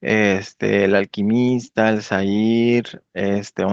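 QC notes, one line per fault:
No faults are heard in this speech clip. The top end stops at about 8 kHz, consistent with the usual band limit of a call microphone and an Opus-coded call path.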